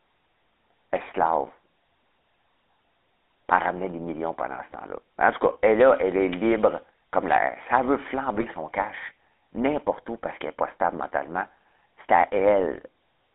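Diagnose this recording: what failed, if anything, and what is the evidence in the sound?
The codec stage failed throughout: this is GSM full-rate coding, consistent with about 13 kbps. The band is confined to roughly 250 Hz to 3.6 kHz, and the speech carries a buzzy, gravelly roughness from regular-pulse excitation. Plain band-limiting would sound dull but clean, without this grain.

GSM bit errors in the network or radio link cause brief squawks and gargling. The first runs from 6.50 to 6.54 s, between "elle là elle est" and "comme l'air". The second runs from 8.36 to 8.46 s, just before "son cash n'importe où". Corrupted filter, pitch and gain values distort a few frames each, consistent with a 1% error rate. That spectral warping distinguishes them from packet-loss gaps or clipping.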